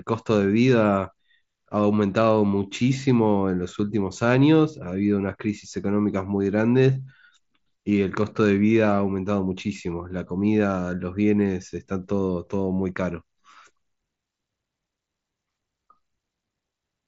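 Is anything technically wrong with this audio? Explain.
No, nothing technically wrong is audible here.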